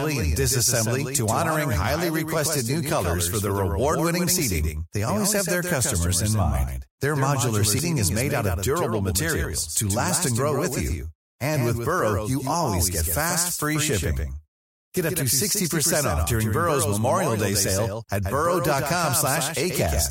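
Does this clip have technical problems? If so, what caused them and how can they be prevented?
Yes. Throughout the speech, a clean full-band copy trails the original by roughly 150 ms at about 5 dB lower, with no decay or room colour. This is a doubled audio track, likely from the signal being captured twice, once via a slower path. Route only one source into the recording.

From 7.76 to 7.80 s, a short glitch cuts in. This is damaged data in a compressed stream: corrupted bytes made the decoder lose sync and skip to the next frame header. Use error-checked transfer and verify files after copying.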